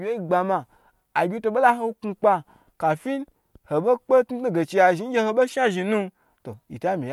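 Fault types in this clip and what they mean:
Nothing stood out on listening to this speech recording.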